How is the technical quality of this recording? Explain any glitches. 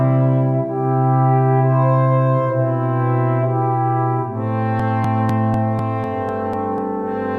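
The recording has one fault. From 4.80 to 6.78 s there are periodic USB or driver dropouts. About every 0.25 s, roughly 2 ms of audio is skipped. A background task is stalling the audio path at a fixed interval. The result is a steady run of ticks, about four per second.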